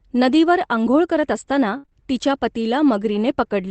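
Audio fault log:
1.77–1.85 s, burst of packet loss: about 60 ms of the call arrived too late or not at all, and the receiver bridged the hole by carrying the last sound forward while turning it down. The listener hears a held buzz or fading hiss in place of real speech, and when the stream resumes about 60 ms of the original audio is gone, so the sound jumps ahead rather than continuing where it broke off.
1.85–1.93 s, short concealed packet loss (two in a row, at 1.85–1.90 s and 1.90–1.93 s): each lost roughly 20 ms that the decoder filled by extending the preceding sound, pitched if voiced and as shaped noise if not, then crossfading back into the received audio. Coming straight after the burst, these stretch the disturbance into a brief smear and wobble, and any short consonant falling in these slots can be lost. The underlying Opus call path at about 24 kbps, band-limited near 8 kHz, adds its normal coding texture but is not a fault.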